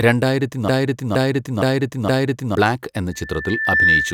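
A broken-record loop runs from 0.68 s to 2.55 s. A fragment of speech about 0.47 s long plays four times in a row, each pass identical and butted against the next, so the sound stutters mechanically instead of moving forward. The likely cause is a stall somewhere in the playback, encoding or streaming chain that kept resending the last fragment it held. Whatever should have been heard in that stretch is gone.

A loudspeaker feedback squeal begins at 3.12 s and lasts to the end of the clip at 4.13 s. A single tone at 1.8 kHz swells over roughly three-quarters of a second until it sits a few decibels above the speech. This happens when a microphone picks up the loudspeaker it feeds: at 1.8 kHz the loop gain rose above one, so that frequency kept reinforcing itself on each trip around the loop.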